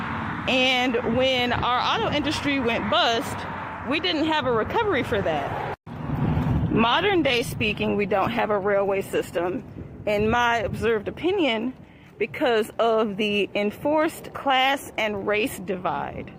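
Around 5.39 s there's a call bitrate drop: the encoder seems pushed from roughly 96 kbps down to about 22 kbps, coding coarsely and trimming the highs. For about 4.3 s the sound goes muffled and watery, clearing up by 9.81 s.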